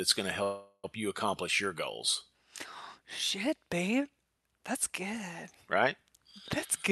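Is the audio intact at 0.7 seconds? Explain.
No. From 0.43 to 0.86 s there is a call audio freeze, likely from delayed packets draining the jitter buffer. The receiver stretches the last sound into a fading buzz or hiss ending in silence, then resumes where it stopped, roughly 0.4 s late, with nothing lost.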